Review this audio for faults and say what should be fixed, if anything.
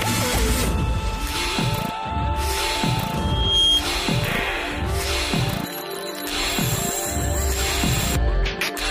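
A loudspeaker feedback squeal runs from 3.16 to 3.84 s: a single 3.2 kHz tone swells over roughly 0.4 s to a few decibels above the sound. The swell, rather than a tone appearing at full level, shows a mic-speaker loop with gain above one. Prevent it by lowering monitor gain, repositioning the microphone, or notching 3.2 kHz.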